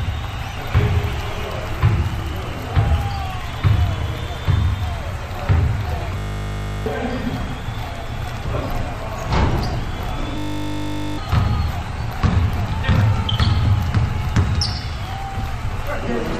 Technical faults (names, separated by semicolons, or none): system hang loop